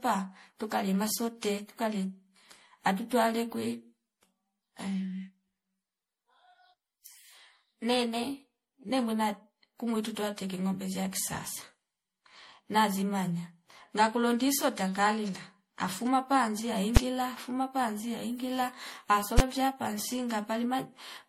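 Speech runs throughout with a swirly, smeared, hollow quality and blurred consonant attacks, more damaged than a single 64 kbit/s MP3 would sound, with nothing above 17.3 kHz. The likely cause is generation loss from re-encoding about five times, with noise and spectral holes building up across shifting frame grids. Two single loud bangs at 16.97 s and 19.39 s come from invalid numbers at full scale. Blocks of 5.8 ms and 11.6 ms, fitting 256- and 512-sample buffers, were pinned to maximum output. Unlike clipping, nothing of the signal survives inside them.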